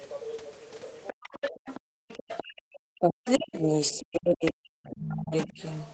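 From 1.07 to 2.54 s, the other side's voice leaks through at roughly 15 dB below the speech. An echo canceller likely left loudspeaker sound in the microphone.

At 1.12 to 1.18 s and 1.5 to 1.67 s, speech is suppressed in double talk. The voice drops by around 40 dB in brief gaps, likely because the canceller ducked both talkers together.

From 1.95 to 2.08 s, the background is gated by the echo canceller. The room sound falls by about 40 dB, then returns.

From 2.43 to 5.61 s, the speech suppression comes back for roughly three seconds, with dips of around 40 dB. Further faint leaks from the other side break through at 3.26 to 3.30 s, 4.45 to 4.51 s and 4.91 to 4.96 s, at roughly 15 to 25 dB below the speech.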